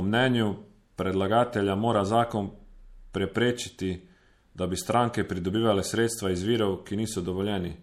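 Throughout, the speech carries plainly audible MP3 compression, likely from a low bitrate near 64 kbps: nothing survives above 16.3 kHz, and weak detail flickers watery and swirly.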